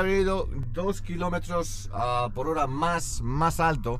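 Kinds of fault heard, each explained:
Channel delay (comb filtering): from 0.63 to 3.13 s the sound turns hollow and phasey, with fixed notches from around 50 Hz upward, spaced about 100 Hz apart. One channel lags the other by roughly 10 ms, so summing to mono cancels those frequencies.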